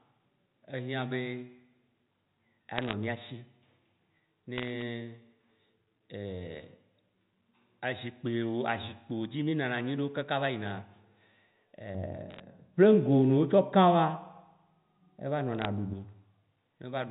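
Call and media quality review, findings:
Bit errors on a digital phone line: sharp isolated ticks and crackle at 2.76–2.93 s, 4.58–4.82 s, 12.30–12.40 s, 15.55–15.65 s. Flipped bits on the 64 kbps G.711 A-law path corrupt single samples at a fraction of a percent. Unlike packet loss, there are no gaps or smearing, and the speech underneath stays intact.

De-emphasis applied wrongly: dull, muffled speech from 11.95 to 15.94 s. A treble-cut stage is acting on audio without pre-emphasis, or a second time, putting 10 kHz about 11 dB below 1 kHz. The slope is gradual, not the abrupt band edge of the telephone channel.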